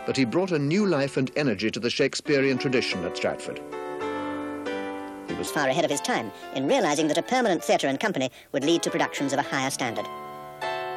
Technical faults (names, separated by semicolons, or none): section at the wrong speed